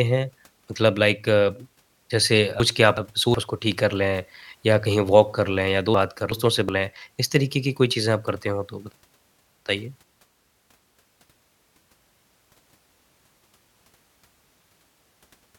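Chunks out of order occur at 2.60–3.34 s, 5.94–6.69 s, 8.92–10.03 s and 12.63–13.75 s, each built from chunks about 372 ms long. In the first two spans a chunk plays one position late; in the last two it plays two positions late. Nothing is lost, but the speech jumps backward and forward in time, producing a jumbled passage with hard joins.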